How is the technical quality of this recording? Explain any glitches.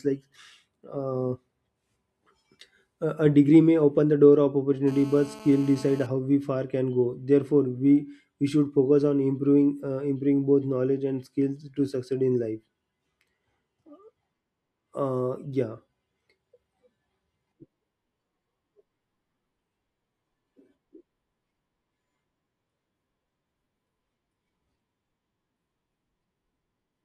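The recording has one glitch, GSM phone buzz, from 4.88 to 6.07 s, between "open the door of" and "how we far can". A nearby 2G phone on a call pulsed its transmitter about 217 times a second, and the audio circuitry rectified those pulses into a steady, raspy 217 Hz buzz with dense harmonics, about 21 dB below the speech.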